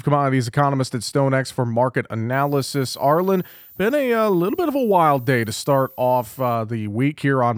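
A speech clip with a switching supply whistle running from 2.33 s to 6.55 s, starting just after "for market". A high, thin tone near 15 kHz sits roughly 25 dB below the speech and wanders between 14.1 and 15.1 kHz. That wandering pitch fits a switching power supply dropping into an audible burst mode, or two supplies beating, with the frequency shifting as load changes. On a spectrogram it appears as a faint, slightly wavering horizontal line high above the speech energy. The waveform barely shows it.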